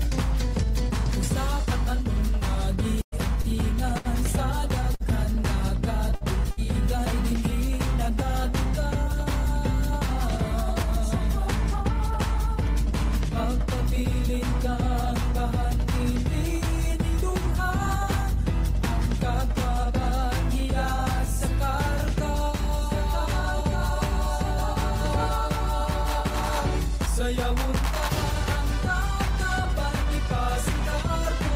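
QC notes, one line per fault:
3.01–5.03 s, repeated packet loss (robotic sound): four separate gaps open in quick succession, the longest 105 ms. Each is patched by continuing the last sound, 246 ms of filled audio in all, about 12% of the span, yet 180 ms of the original never returns. The repeated patching gives the stretch its choppy quality, and the next gap arrives before the sound settles.
6.15 s and 6.51 s, short stall from a late packet (two events, 6.15–6.24 s and 6.51–6.60 s): each time the jitter buffer runs dry because a packet is not there when due, so the receiver holds the last sound for 60 ms until it arrives, then resumes from the same point. Nothing is lost; a sound is simply held too long, and the playout delay grows by 60 ms each time.
8.44–18.50 s, jitter buffer speed-up: the buffer holds more audio than its target, so the receiver trims pieces a pitch period or a few long, over and over, to pull the delay back down. 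Roughly a tenth of a second disappears over these ten seconds, and playback runs at 101% speed with the pitch unchanged. That is well short of the point where the sound would seem hurried.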